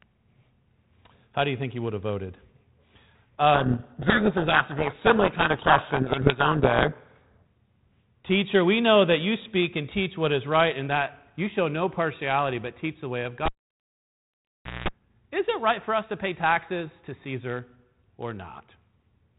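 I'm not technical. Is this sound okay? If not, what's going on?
No. From 3.54 to 7.43 s there is a codec payload misread: the two ends of the phone link disagreed on the order of the bits inside each chunk of compressed sound. The receiver decoded scrambled data, so the speech is buried under harsh, grinding distortion.

From 13.46 to 14.88 s, right after "teach the way of", there is a cable pulled and plugged in. A live lead came out and went back in. You hear a pop, then about 1.4 seconds of near silence, a short 60 Hz mains buzz of about 0.2 seconds as the plug touched, and another pop as the sound returns.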